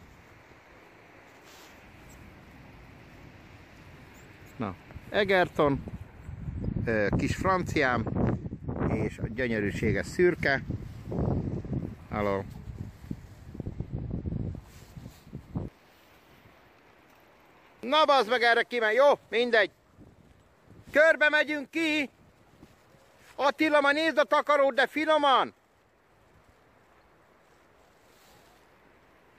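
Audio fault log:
No audible faults.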